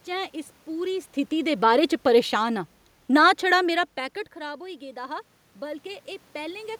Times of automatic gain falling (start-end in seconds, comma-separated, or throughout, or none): 1.33-3.95